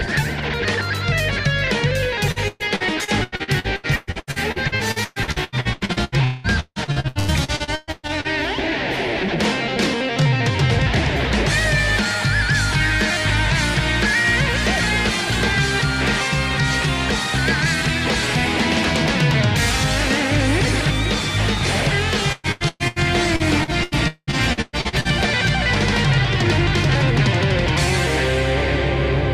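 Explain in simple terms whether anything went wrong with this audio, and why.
Repeated packet loss (robotic sound) hits from 2.31 to 8.27 s, again from 22.32 to 22.99 s, and from 23.36 to 25.08 s. Pieces of the audio kept going missing, up to about 0.2 s at a time. Each hole was patched by stretching the last bit of sound, so those stretches come out choppy.

A drift correction step shows up from 17.66 to 19.41 s. The sound plays about 5% fast and rises in pitch by nearly a semitone. This is likely playback software adjusting its speed in one jump to keep two clocks in step.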